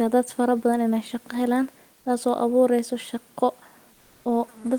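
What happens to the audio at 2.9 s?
Nothing goes wrong at 2.9 s. The speech carries on intact, with only the room's own background noise sitting far below it, about 38 dB down.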